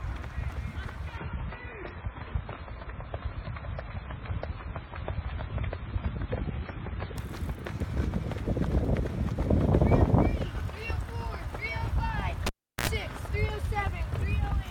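From 1.17 to 7.17 s the audio is an adaptive stream at a lower bitrate. Nothing above 5.5 kHz remains, artefacts rise, and quality switches abruptly with no gap, which fits a drop from 128 to 16 kbit/s MP3. From 12.46 to 12.88 s a cable is pulled and plugged in. A pop leads into about 360 ms of near silence, then roughly 69 ms of 60 Hz mains buzz and a second pop, unlike a clean dropout.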